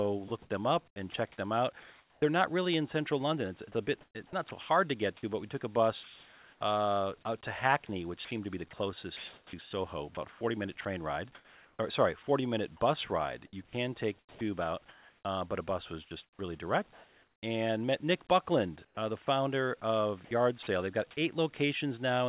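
Speech chopped by the voice detector shows up seven times: 0.28–2.22 s, 3.77–5.23 s (ending right before "but we took a"), 7.87–12.27 s, 13.67–15.25 s (just before "uh but a bus"), 16.05–17.43 s (between "but a bus was" and "and met"), 18.85–19.27 s, and 20.25–20.67 s. Each stretch gets choppy, with quiet edges dropping out. That's likely a sender-side voice detector gating on and off, with comfort noise filling anywhere from about 100 ms to 1.2 s per stretch.

From 6.03 to 6.61 s, comfort noise takes the place of the background. The room tone turns into a flat, featureless hiss about 3 dB quieter, sitting roughly 28 dB under the loud parts, before the real background comes back. This is likely the receiver synthesising noise while the sender pauses transmission.

Nothing above 4 kHz comes through, which fits a G.711 A-law call path at 64 kbps.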